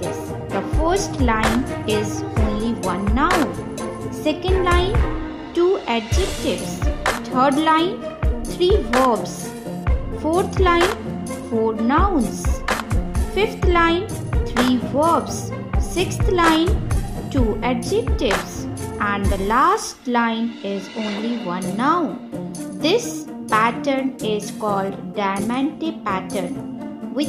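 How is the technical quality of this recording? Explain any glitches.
The technical quality of this recording is sound, with no glitches to explain.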